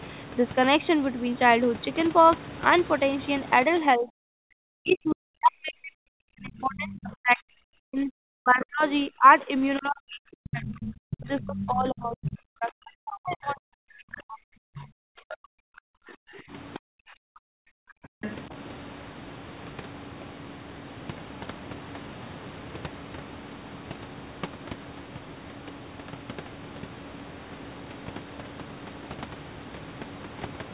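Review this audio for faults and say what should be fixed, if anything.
Speech suppressed in double talk runs from 3.67 to 18.54 s. The talker's level sinks in deep, uneven dips of up to about 40 dB, likely because the echo canceller ducks the microphone while both sides speak. On a waveform the envelope collapses in chunks; on a spectrogram the harmonics fade or break off. To prevent it, use an echo canceller with proper double-talk detection and a headset to cut acoustic coupling.

The other side's voice leaking through appears at 4.91–5.13, 6.94–6.98, 10.80–11.68, 12.25–12.29, 14.77–14.83, 15.29–15.37 and 18.22–18.35 s. It sits about 10 to 20 dB below the speech and shows as faint, separate harmonic fragments in the spectrogram. To prevent it, lower the loudspeaker volume and let the echo canceller converge fully.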